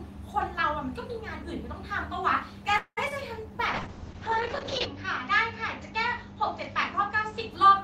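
A speech recording over a call link. From 2.77 to 2.99 s there is a call audio freeze, likely packets stalling until the jitter buffer emptied: the last sound is stretched into a fading buzz that drops to 80 ms of silence, adding about 0.2 s of delay without losing anything. At 3.09 to 3.12 s, short concealed packet loss means about 20 ms never reached the decoder, and the synthesized fill leaves a brief smear. From 3.75 to 7.57 s, a call bitrate drop took the encoder from 32 to 7 kbps, narrowing bandwidth from 20 kHz to 8 kHz. The voice turns muffled and rough, worst for about 1.1 s at the lowest rate.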